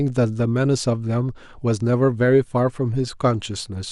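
From the first moment to the end, the speech has a dull, gurgling quality with a grainy edge, which is the classic sign of MP2 compression, likely at a low bitrate in the region of 80 kbps. The encoder runs short of bits, so it shuts off the upper sub-bands and quantises the remaining ones coarsely. You hear lost brightness, a top end that flickers in and out, and that familiar digital-radio warble sitting on the speech throughout.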